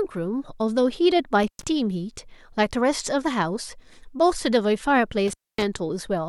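At 1.43 s the speech breaks up with an intermittent contact, a loose plug or cable opening for about 114 ms within the 1.43 to 1.64 s stretch. It returns at 5.28 to 5.64 s, with the line open for about 251 ms. Unlike a digital dropout, which cuts to clean silence, each break carries scratchy crackle at its edges as the contact scrapes, and faint hiss remains while the circuit is open.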